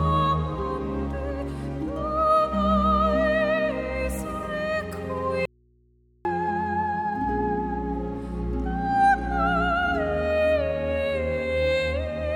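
At 5.45 s the audio drops out to a faint residue for about 0.8 s, returning abruptly at 6.25 s. The gap holds only low mains hum, roughly 35 dB below the signal, likely from a lost upstream feed while the open input stayed live.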